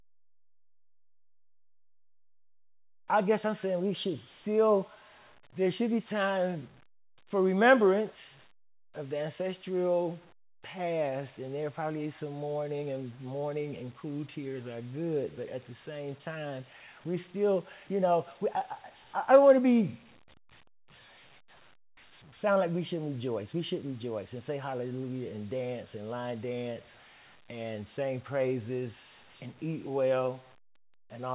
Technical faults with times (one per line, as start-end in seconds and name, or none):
none